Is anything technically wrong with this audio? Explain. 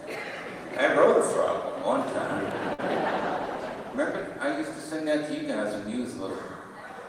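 Yes, there are two faults.

At about 2.73 to 2.81 s there's a short stall from a late packet. A packet showed up late, the jitter buffer ran dry, and the receiver held the last bit of sound for about 51 ms until the data caught up. Playback then picked up from the same spot, so nothing is lost, but that moment hangs on too long and pushes everything after it about 51 ms later.

From about 3.10 to 5.05 s you get a call bitrate drop. The call's bandwidth estimate fell, so the encoder had far fewer bits to work with. What you hear fits Opus dropping from roughly 32 kbps to 18 kbps and staying at the bottom for about 1.1 s. Coarser coding makes the sound rough, watery or muffled through that stretch, and it clears up again by around 5.05 s.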